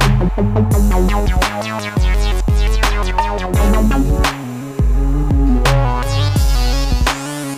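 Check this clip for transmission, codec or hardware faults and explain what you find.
No faults can be heard anywhere in the clip. The sound carries on without any disturbance that would need explaining.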